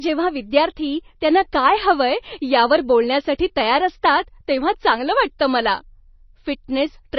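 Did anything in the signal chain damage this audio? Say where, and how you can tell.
Yes. Across the whole speech clip the sound is watery and swirly, with s sounds turning into metallic chirps, consonant attacks smeared, and nothing at all above about 5.9 kHz. That pattern points to the codec stage, likely MP3 compression at a heavy setting, which fits a bitrate around 24 kbps. Starved of bits, the encoder chopped off the treble at a fixed point and dropped weak frequency lines that flicker on and off from frame to frame.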